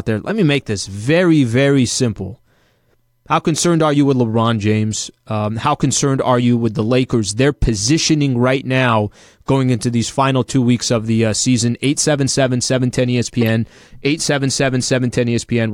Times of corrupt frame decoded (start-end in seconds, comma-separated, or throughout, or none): 11.84, 13.41-13.49